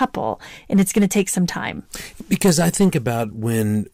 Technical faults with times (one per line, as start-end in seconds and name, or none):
0.02-0.04 hard clipping
0.73-1.21 hard clipping
2.32-2.97 hard clipping